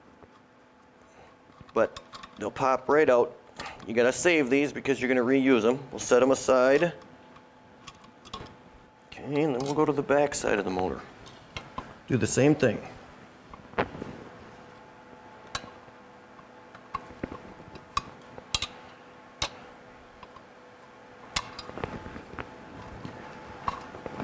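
Gain pumping runs through the whole clip: the level keeps lurching, with a swing of around 10 dB. The likely cause is input gain set far too high, with a fast limiter or compressor clamping down on every peak and releasing in the gaps. Loud and quiet passages end up squeezed close together, giving a flattened, breathing texture. The call microphone path's band limit near 8 kHz is present alongside it.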